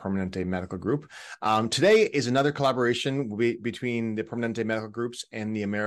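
It's a short speech recording, and nothing in it stands out as a technical problem at any point.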